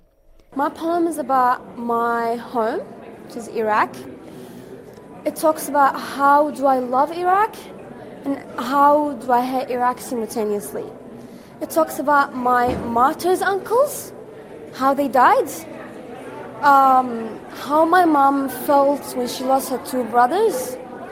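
Nothing technical stands out here; the audio runs along without any dropouts, glitches or other faults worth pointing to.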